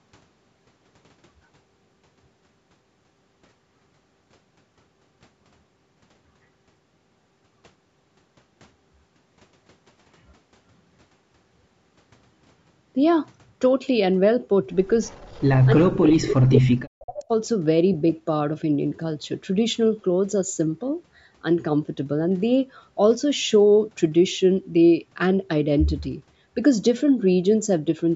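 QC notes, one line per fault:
15.04–15.66 s, 16.08–16.26 s and 17.16–17.24 s, echo leak: the far end's echo canceller likely failed to remove all of the loudspeaker pickup, so a copy of the speech returns about 338 ms late, faint at about −30 dB, then loud at about −5 dB, then about −15 dB.
15.67–16.08 s and 16.25–17.3 s, speech suppressed in double talk: with both sides talking at once, the canceller likely could not separate talker from echo and turned both down. The speech sinks by around 40 dB for roughly 0.4 s, then for about a second.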